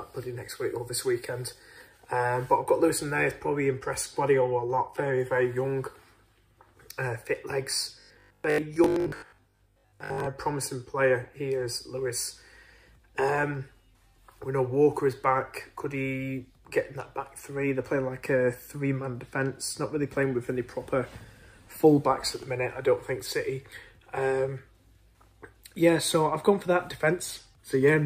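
From 8.00 to 10.32 s, robotic sound from repeated short buffers: a rigid 50 Hz buzz, likely from 20 ms blocks looping with roughly half the audio skipped, visible as repeating waveform segments and 50 Hz-spaced spectrogram harmonics.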